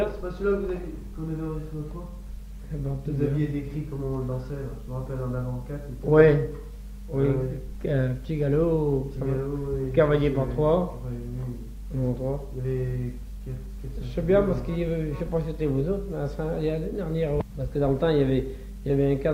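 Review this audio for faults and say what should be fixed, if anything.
Nothing here needs fixing; I listened all the way and didn't hear any faults to flag.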